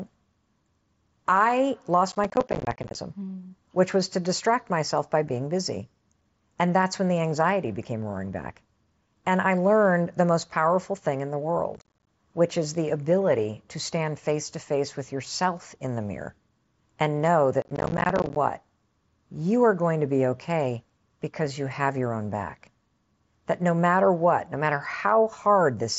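Processor overload crackle runs from 2.12 to 2.95 s, from 11.75 to 12.07 s (after "powerful thing in the", before "which is the ability"), and from 17.62 to 18.36 s (after "and know"). The processor misses roughly 30, 20 and 40 buffer deadlines of about 10 ms in the three stretches, and each miss leaves a hard-edged silent gap, so the speech sounds gritty and torn. On the waveform these show as rapid notches. On a spectrogram they appear as dense vertical broadband stripes.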